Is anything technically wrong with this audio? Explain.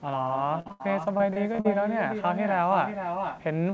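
Yes, there are four kinds of fault in this speech clip. It passed through a call codec whose content stops at 8 kHz, consistent with wideband G.722.

Echo with no canceller runs through the whole clip. The far end's loudspeaker output reaches its microphone and nothing removes it, so every phrase returns about half a second later at about 7 dB below the original, sounding thinner. On a spectrogram, each burst of harmonics has a fainter duplicate shifted right by roughly that delay. The waveform shows quieter ghost envelopes trailing each syllable.

A burst of packet loss runs from 0.60 to 0.67 s and another from 0.71 to 0.81 s. Each burst loses a run of packets of about 60 ms and 80 ms. The receiver extends the last sound and fades it, so a voiced stretch becomes a held buzz that dies away before the speech jumps ahead with material missing. A spectrogram shows flat, unchanging harmonic bands that dim toward the gap's end. 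The waveform shows a steady, shrinking periodic pattern.

Short concealed packet loss falls between those bursts, at 0.67 to 0.71 s, with about 20 ms missing. The decoder bridges the hole by continuing the last sound and then blends back into real audio. This leaves a brief smear or wobble rather than a clear gap. On a spectrogram it appears as a short stretch of frozen spectral content. The waveform shows a short continuation of the preceding sound where natural variation should be.

Repeated packet loss (robotic sound) affects 1.17 to 1.66 s. Four separate gaps, the longest 38 ms, are each patched by extending the last sound, and together they cover about a fifth of that span. The speech turns choppy, with fragments missing. A spectrogram shows the harmonic tracks repeatedly freezing into short horizontal blocks. The waveform shows recurring uniform, looped segments interrupting the natural envelope.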